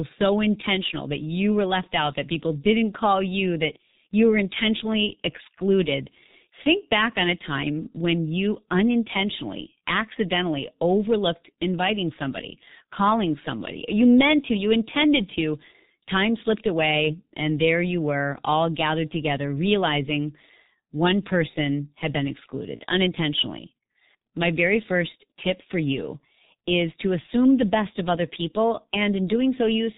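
Throughout, the G.723.1 codec leaves the speech muffled and hoarse, fitting about 6.3 kbit/s. A spectrogram shows nothing above 4 kHz and blurred consonant onsets.

At 22.76 to 22.83 s, after "one person had been", VoIP packet loss concealed by the speech codec smears about 30 ms into a fading buzzy tone or coloured noise. The waveform shows a dip in level, which points to a single lost frame.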